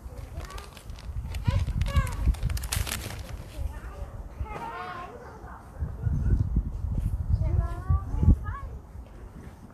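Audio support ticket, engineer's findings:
Hissy, grainy treble across the whole clip, 0 to 10 s; tones roughened, attacks smeared. Plainly audible. Likely cause: Vorbis compression at low quality, fitting roughly 38 kbps. The codec keeps a smooth spectral floor but quantises the high-band residue so coarsely that fine detail turns into noise of similar energy.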